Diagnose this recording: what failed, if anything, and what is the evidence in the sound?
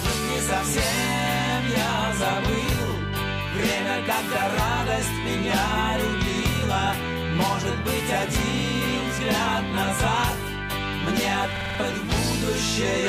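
Driver or buffer stage, a system hang loop: from 11.56 to 11.80 s one 46 ms slice repeats five times, a 21.5 Hz stutter. It fits a 2048-sample ring buffer replaying while the driver froze.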